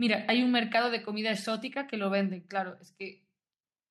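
Speech recording with no technical faults detected anywhere in the clip.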